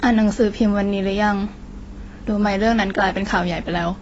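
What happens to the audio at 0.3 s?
At 0.3 s the speech carries the same damage heard across the whole clip: nothing reaches above 7.8 kHz, and the sound is dull and smeared, with a fizzy, warbling edge on sibilants and held sounds. The likely cause is AAC compression at a low bitrate, which fits AAC-LC at around 24 kbps. The encoder drops the high band and quantises the remaining spectrum so coarsely that holes and substitute noise become plainly audible.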